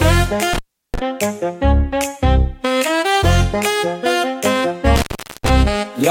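At 0.53 s the sound cuts out until 0.99 s, with a line open for about 350 ms, and again from 4.96 to 5.49 s, open for about 410 ms. Both are intermittent contact: a loose plug or cable briefly breaks the connection. Scratchy crackle marks each break and restore, and faint hiss fills the gaps. That analogue residue is what separates it from a digital dropout, which falls to clean silence with no crackle.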